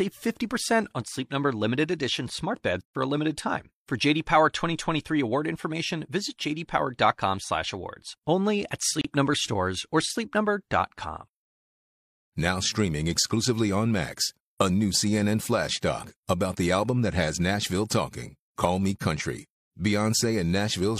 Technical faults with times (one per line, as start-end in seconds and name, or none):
9.01-9.04 gap between stream segments